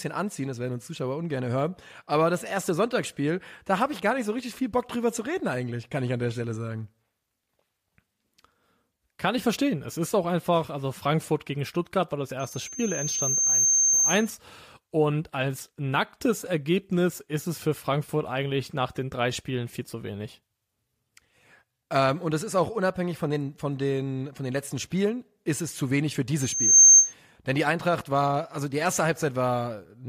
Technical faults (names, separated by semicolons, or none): loudspeaker feedback squeal